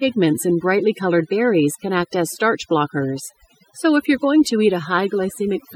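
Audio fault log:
Throughout: overdone noise removal. A noise reduction stage was pushed too hard on a noisy speech recording, so individual frequency bands that sat close to its noise estimate were pulled far down or gated out entirely, taking the softer parts of the voice with them. The background drops and breaks up into twinkling specks. On a spectrogram, the noise floor shows as dark emptiness dotted with isolated bright blips, and the speech harmonics look patchy, with holes punched through them.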